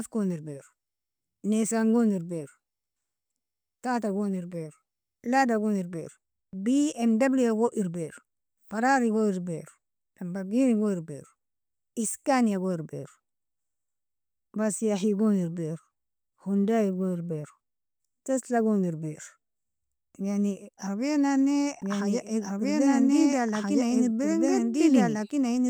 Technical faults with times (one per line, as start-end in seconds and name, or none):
21.82-25.69 doubled audio track